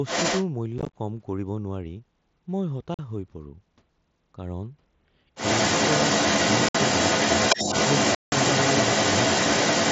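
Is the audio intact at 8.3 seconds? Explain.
No. From 8.15 to 8.32 s there is unconcealed Bluetooth headset packet loss: voice packets between headset and phone never arrived, and with no concealment the gap was filled with silence or an idle pattern. The result is a hole of about 0.17 s with hard edges that can click at entry and exit, which fits a run of a couple of dozen consecutive lost packets.

The same moment also falls inside a stretch, from 5.35 s to the end, where a second voice is audible alongside the talker, a little louder than the speech itself. This is likely the other side's voice leaking through: the far end plays on the device's loudspeaker, the microphone picks it up again, and the echo canceller leaves a residue.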